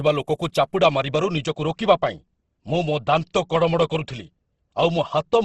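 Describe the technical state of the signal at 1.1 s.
At 1.1 s the speech carries Opus compression damage, present across the whole clip rather than at this moment alone. The likely cause is Opus in its music mode at a low rate, which fits roughly 16 kbps. Short of bits, the encoder keeps each band's energy but fills the detail with folded or noise-like content, so the voice sounds rough and grainy rather than swirly. A spectrogram shows a hard ceiling near 12.1 kHz and smeared, noisy upper bands without clear holes.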